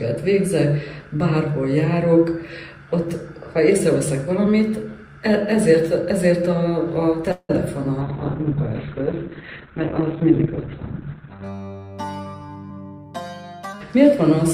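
Call audio freeze at 7.31–7.51 s: the last sound stretches into a fading buzz, then 50 ms of silence, likely packets stalled and the jitter buffer emptied.

Call bitrate drop from 8.02 to 11.50 s: bitrate falls from 64 to 6 kbps, bandwidth narrows from 20 kHz to 4 kHz, so audio turns coarse and muffled.

Jitter buffer speed-up at 12.19–13.12 s: removing short pitch-period pieces trims roughly a fifth of a second, running audio 20% faster at unchanged pitch, sounding hurried.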